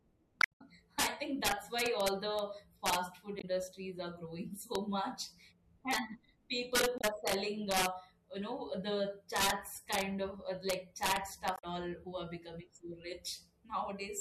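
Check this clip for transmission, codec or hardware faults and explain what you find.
Two faults affect this speech recording: integer overflow throughout, and four bursts of damaged data in the compressed stream.

Integer overflow runs through the whole clip. A gain stage drives the signal about 6 dB past the largest integer, and instead of limiting it, the arithmetic wraps each offending sample to the opposite extreme. Only a small fraction of samples, well under one percent, cross that line, but every loud peak becomes a violent crack, far harsher than ordinary clipping.

Damaged data in a compressed stream appears at 0.38 to 0.62 s, 3.37 to 3.44 s, 6.95 to 7.04 s and 11.55 to 11.64 s. Corrupted bytes there make the decoder misread frames and lose sync until it finds the next valid header. Each spot is heard as a brief chirp, squawk, click or short hole.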